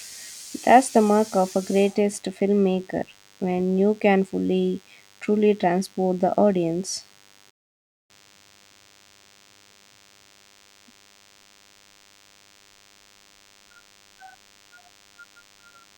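From the start, a DECT cordless phone buzz sits well below the speech: a thin, steady 100 Hz drone rich in harmonics, caused by rectified radio bursts from a nearby handset or base. At 7.50 s, just after "truly transport the audience", a playback stall silences the speech for about 0.59 s until 8.11 s, likely from the player running out of data or its thread being blocked.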